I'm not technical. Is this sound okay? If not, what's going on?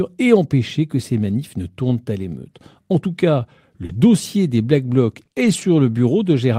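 No. There are a few brief network glitches in this speech.

Lost packet rebuilt from error correction at 1.29 s, between "et empêcher que ces" and "ne tournent à l'émeute", and again at 3.89–3.95 s, after "tout cas": missing pieces were replaced by a rougher backup copy, so the speech briefly sounds grainier.

Short concealed packet loss at 3.85–3.91 s, also after "tout cas": 40 milliseconds never arrived, and the last sound was stretched over the hole, leaving a tiny smear.

Repeated packet loss (robotic sound) at 5.17–5.63 s: three small dropouts followed one another, each one patched over, so the speech turns choppy here.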